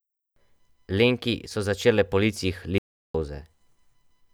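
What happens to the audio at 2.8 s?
The input feeding the recorder was lost, likely through a disconnected device, a failed link or an accidental mute, while the recording carried on writing silence. That produces an audio dropout to silence from 2.78 s to 3.14 s: the speech stops abruptly mid-flow and resumes just as suddenly about 0.36 s later. The gap is dead silence with no room tone beneath it, and whatever was spoken during that stretch is missing.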